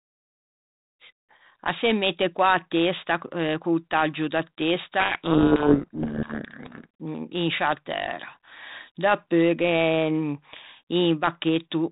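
A codec payload misread from 5.0 to 6.85 s: the G.726 decoder reads code-word bits in the wrong order, burying the speech in harsh distortion.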